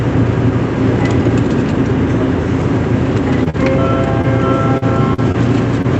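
Two packets failed to reach the decoder in time, from 3.44 to 3.48 s and from 3.50 to 3.56 s, the second along with a delay shift of about 15 ms. This is short concealed packet loss: the receiver extended the preceding sound for roughly 20 to 40 ms each time, leaving a brief smear or wobble.

The Opus stream in this call path runs at 64 kbps with an 8 kHz bandwidth. In it, single packets rebuilt from error correction at 3.54, 3.62 and 3.72 s were played from low-bitrate copies, so those 20 ms frames sound rougher and noisier instead of dropping out.

Between 4.22 and 5.36 s, repeated packet loss opened four gaps, the longest 42 ms, with about 11% of that stretch concealed and around a tenth of a second rebuilt. The result is choppy, robotic-sounding audio.

One more short concealed packet loss at 5.82 to 5.86 s produces a final 20 ms smear.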